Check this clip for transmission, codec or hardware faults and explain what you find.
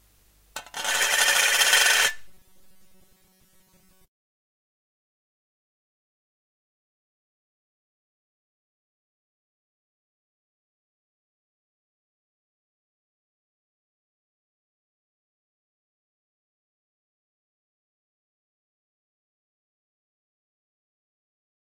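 One fault is present: robotic sound from repeated short buffers, from 2.28 to 4.36 s. The audio turns into a rigid, metallic buzz at 188 Hz, likely because new data arrived too slowly and the playback side kept repeating about 5.3 ms of audio in place of roughly 70 percent of the material. On a spectrogram this shows as evenly spaced horizontal lines at multiples of 188 Hz, and the waveform shows identical short segments repeating.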